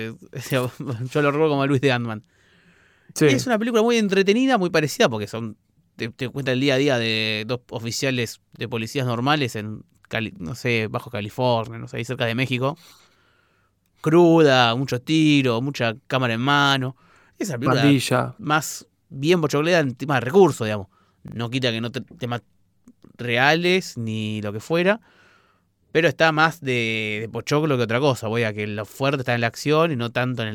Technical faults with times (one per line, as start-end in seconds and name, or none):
8.56-8.60 repeated buffer
10.36-10.40 repeated buffer
21.28-21.36 repeated buffer
28.92-28.96 repeated buffer